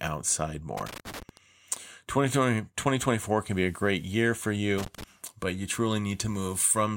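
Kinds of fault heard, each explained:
Loose connector crackle: A worn or dirty contact keeps making and breaking the speech path. Each break chops the signal, and stray DC adds pops. It comes as irregular scratchy bursts, from 0.77 to 1.37 s and again from 4.78 to 5.04 s.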